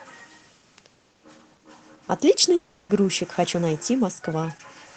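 From 2.55 to 2.91 s the speech gives way to a buzzy, smeared continuation of the last sound that fades away. This is most likely a long network dropout. About 0.34 s of audio never arrived, the receiver filled the whole gap with this concealment, and the speech resumes without the lost part. On a spectrogram the stretch shows blurred, repeated harmonics thinning out, with the band above 8 kHz empty from the call codec. The waveform shows a decaying envelope rather than a flat line.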